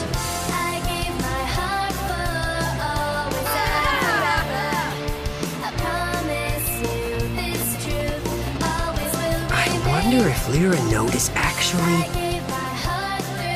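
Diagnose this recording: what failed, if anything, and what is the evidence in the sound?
GSM signalling bursts got into the analogue wiring: a 2G handset nearby was signalling, and something in the analogue audio circuit rectified its radio bursts into the audio band. From 6.91 s to 9.99 s a galloping dit-dit-dit of short buzzes sits over the sound. Each buzz repeats at about 217 Hz, the burst rate of the phone's transmitter, and the interference lies roughly 10 dB below the wanted signal.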